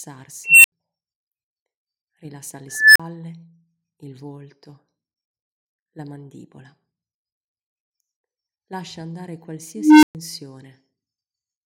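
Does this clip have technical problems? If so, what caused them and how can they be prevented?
Yes. An unstable filter squeals at 0.44, 2.68 and 9.76 s. Its tones near 3 kHz, 2 kHz and 300 Hz swell for about a quarter second, clip, then drop to brief silence. Keeping recursive filter coefficients within their stability limits prevents this.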